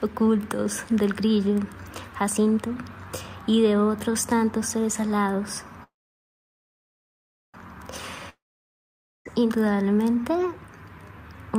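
At 5.83 s the sound stops moving forward and a brief buzzy continuation of the last instant fades out, leaving roughly 1.6 s of silence until 7.57 s. This is a call audio freeze, likely caused by packets stalling in transit until the jitter buffer ran dry. Nothing is lost: the audio resumes exactly where it halted, now running about 1.7 s later. A waveform shows a short decaying tail and then a flat line, and a spectrogram shows a smeared band dissolving into a blank column.

From 8.29 s to 9.28 s comes a long network dropout. A similar fading buzz gives way to about 0.87 s of near-silence. This time the audio returns further along, with roughly 0.96 s of material skipped, most likely because packets never arrived at all. The waveform shows a decaying tail and then a gap. The spectrogram shows an empty stretch and a discontinuity where the resumed content fails to line up with what came before.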